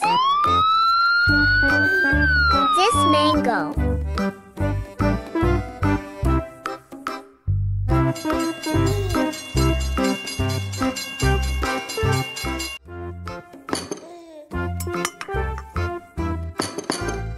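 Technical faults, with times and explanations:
No technical faults can be heard.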